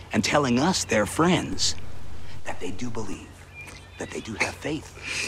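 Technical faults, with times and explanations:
1.53 to 3.13 s: DC step. The waveform's zero line jumps by about -26 dBFS, then returns. Each shift gives a low thump; the sound continues unchanged.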